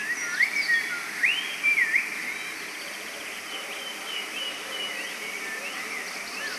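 Generation loss runs throughout, with nothing above 13.4 kHz and a swirly, hollow smear that blurs every attack. The cause is likely repeated lossy re-encoding, around seven passes, each requantising on a shifted frame grid, which fits a WMA chain near 96 kbit/s.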